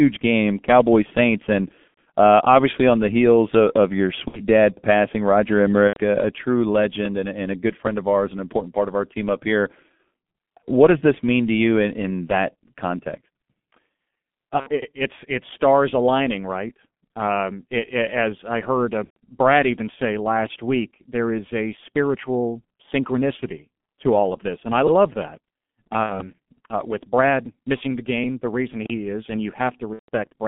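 Speech heavily damaged by the G.723.1 codec: its low-rate coding, consistent with about 6.3 kbit/s, confines the sound to roughly 200 Hz to 3.5 kHz, leaving it muffled, hoarse and smeared on consonants. VoIP packet loss concealed by the speech codec occurs at 1.88 s (just before "uh obviously on the"), 4.28, 5.88 (before "a a true legend"), 14.60, 19.04, 26.03 (before "uh with") and 29.93 s. Each gap of 60 to 150 ms, matching two to five missing 30 ms frames, becomes a fading extrapolated tone or coloured noise, muted from the third lost frame onward, that leaves the following sound briefly weak.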